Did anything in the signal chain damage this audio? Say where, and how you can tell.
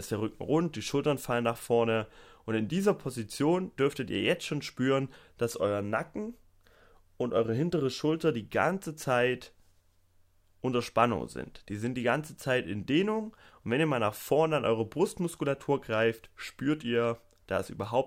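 No, nothing in this speech recording stood out on listening as damage from any stage of the signal chain.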